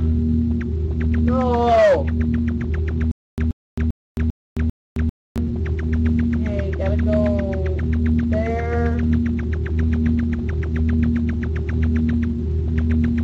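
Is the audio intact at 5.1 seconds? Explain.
No. A stalled stream likely replayed its last fragment from 3.11 to 5.38 s, causing a stutter with silent gaps: a 129 ms burst repeating between 267 ms silences.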